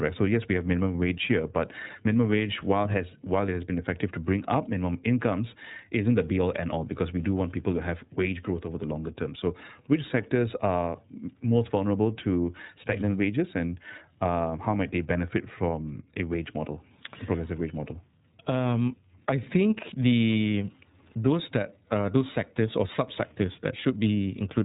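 From start to finish the speech runs through the iLBC codec, and you can plainly hear it: nothing gets past about 3.8 kHz, so it sounds boxed-in and rough, a bit synthetic. Each frame is coded independently, and the sound fits 30 ms frames at about 13.33 kbps.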